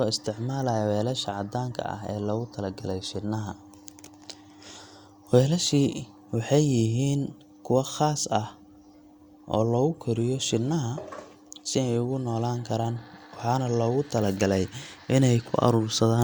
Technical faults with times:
none

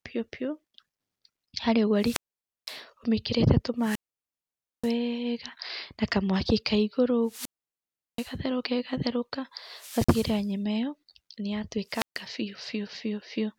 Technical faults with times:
1.97-2.81 wireless microphone squelch dropout
3.79-4.94 wireless microphone squelch dropout
7.24-8.36 wireless microphone squelch dropout
9.67-10.53 wireless microphone squelch dropout
11.87-12.23 wireless microphone squelch dropout

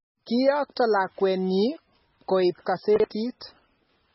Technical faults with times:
0.00-4.14 MP3 compression
2.96-3.04 chunks out of order

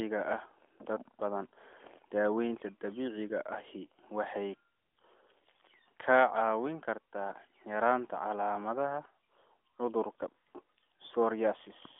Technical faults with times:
none

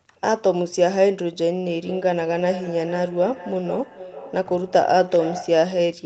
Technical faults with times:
1.65-5.77 feedback echo between two devices

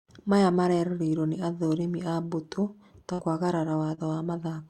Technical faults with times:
3.13-3.20 burst of packet loss
3.94-3.99 short concealed packet loss

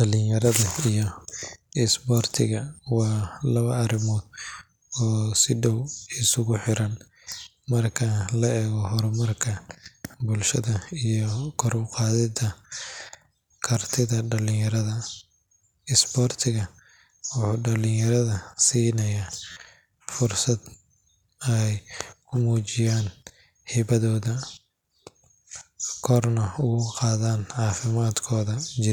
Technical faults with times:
1.39-1.42 repeated buffer
9.85 repeated buffer
19.52-19.56 repeated buffer

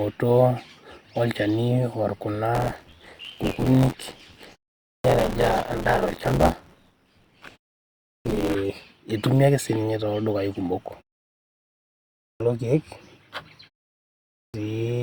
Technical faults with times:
2.54-8.55 buffer tearing
4.81-5.04 clipped start after a pause
8.00-8.25 clipped start after a pause
12.16-12.40 clipped start after a pause
14.30-14.54 clipped start after a pause

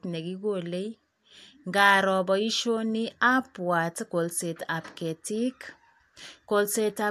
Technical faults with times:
none

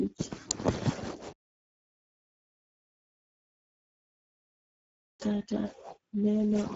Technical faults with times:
0.00-6.76 Speex codec

